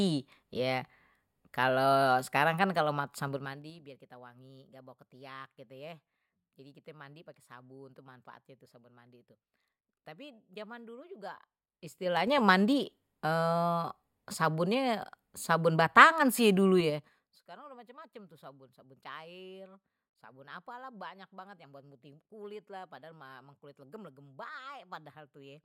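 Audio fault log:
3.24–3.8 s, 11.68–12.4 s, 16.76–17.48 s: zipper noise. The speech level falls by roughly 20 dB, rises by roughly 20 dB, then falls by roughly 25 dB. Each move happens in unsmoothed 3 dB jumps at about ten per second, and every jump puts a small discontinuity in the waveform that ticks audibly. The waveform envelope shows a staircase, and the spectrogram shows faint, evenly spaced vertical broadband lines across each span.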